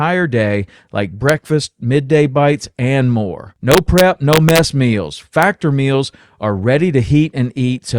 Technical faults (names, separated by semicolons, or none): integer overflow